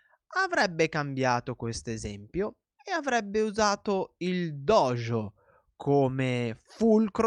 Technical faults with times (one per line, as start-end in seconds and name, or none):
none